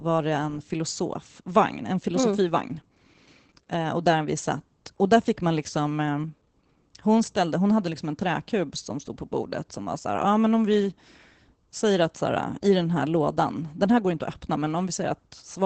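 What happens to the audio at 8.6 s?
Opus voice compression is active at 8.6 s, as it is across the whole clip. The SILK linear-prediction coder keeps only a wideband range, with nothing above 8.8 kHz, and codes the excitation coarsely, which fits about 12 kbps, leaving the speech plainly muffled, hoarse and slightly robotic.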